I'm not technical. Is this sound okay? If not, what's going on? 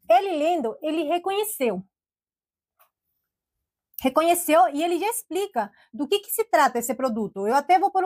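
No. From 6.66 to 7.52 s the sound slows by 5.3% and drops about a semitone, then returns to normal. This is a drift correction step. Software keeping two clocks in sync likely changed the playback speed in one jump.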